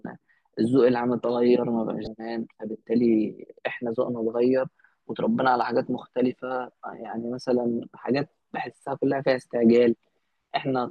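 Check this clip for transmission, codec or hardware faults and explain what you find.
One fault is present in this speech clip. From 2.04 to 2.07 s there is a burst of damaged data in a compressed stream. About 32 ms of the encoded data is corrupt there. The decoder cannot read those frames properly. It loses its place in the stream and hunts for the next valid frame header before decoding resumes. The result is a brief chirp, squawk, click or short hole that lasts only an instant.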